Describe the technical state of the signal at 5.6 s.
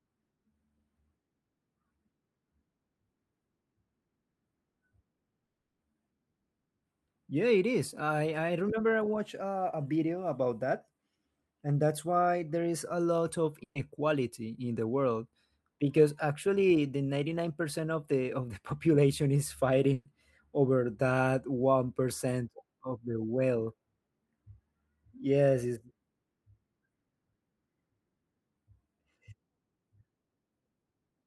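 Long network dropout from 5.45 to 5.81 s: the speech smears into a fading buzz, then 250 ms of silence, likely because incoming audio stopped and was lost.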